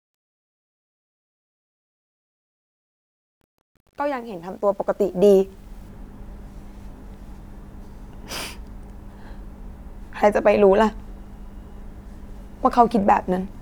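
Speech fading in from the start, and that fade up to 5.89 s has truncation distortion. The quiet part before 4.42 s goes gritty, which fits a gain stage working at 10 bits without dither.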